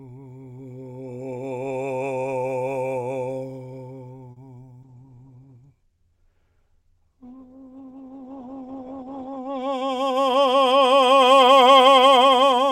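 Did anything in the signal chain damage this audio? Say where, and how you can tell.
Yes. Three faults land in the network and codec stages of a call path.

A short stall from a late packet sits at 4.31 to 4.38 s: the music hangs on one held sound for about 50 ms, with a slight buzz or dip, then picks up exactly where it left off. Nothing is skipped, which separates this from loss concealment, where material vanishes. The jitter buffer ran dry while a packet was late and stretched the last audio to cover the gap, adding 50 ms of delay.

A call bitrate drop runs from 4.84 to 9.68 s. The encoder falls from 128 kbps to 13 kbps and stays near the bottom for about 4.8 s. The top end collapses from 20 kHz to 8 kHz, and the music turns coarse and watery. A plain low-pass filter or EQ change would dull the highs without that grainy, smeared texture. The rate controller cut the bit budget after the bandwidth estimate fell, so the codec quantised harder and discarded the upper band.

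A jitter buffer speed-up follows at 9.59 to 10.11 s. Playback runs at about 109% speed, so the tempo rushes while the pitch stays put. That rules out a sample-rate mismatch, which would also raise the pitch. The buffer had overfilled and was draining its excess by cutting tiny pitch-period slices, around 50 ms in total. This compresses time.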